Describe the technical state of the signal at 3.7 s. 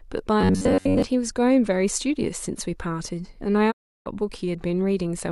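A digital broadcast dropout spans 3.70 to 4.08 s. The receiver mutes on failed frames with a 20 ms fade to clean silence, not a clicking hard cut.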